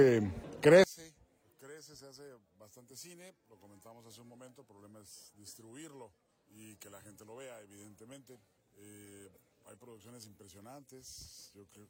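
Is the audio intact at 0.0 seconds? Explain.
Yes, at 0.0 seconds the audio is intact, with no dropout, click, distortion or other fault at that moment.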